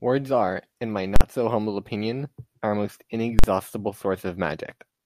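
At 1.16 s and again at 3.39 s the speech is broken by invalid numbers at full scale. Each time, a calculation produced infinite or invalid values that pinned the output to one extreme value for about 46 ms. That block fits a 2048-sample buffer. Each is heard as a single harsh bang, and the waveform shows a flat slab far beyond the speech peaks. The spectrogram shows a bright vertical stripe across all frequencies.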